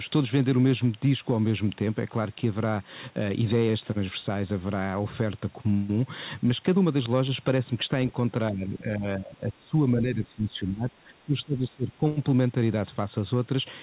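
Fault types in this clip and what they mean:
Speech suppressed in double talk: from 8.51 to 12.05 s the speech drops up to about 15 dB for roughly three seconds, likely an echo canceller clamping down during crosstalk. The waveform shows shrunken stretches, and the spectrogram thins in patches.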